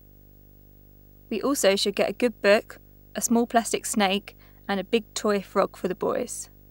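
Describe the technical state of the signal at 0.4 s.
At 0.4 s the speech carries video or display buzz, present for the whole clip: a screen or video cable is leaking into the audio, giving a 50 Hz field-rate buzz with hash above it, around 30 dB below the speech. A thin 15.6 kHz line-rate whistle separates it from plain mains hum.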